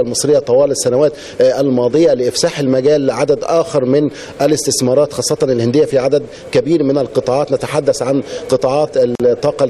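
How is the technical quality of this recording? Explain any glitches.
There is one glitch. At 9.15 s the sound drops out until 9.20 s, a hole of about 45 ms. Then it resumes exactly where it left off, with softened edges around the dropout. This is a gap at a join of encoded pieces. The audio was encoded as separate pieces and butted together untrimmed, so the encoder's start-up delay and final-frame padding remain as silence at the seam.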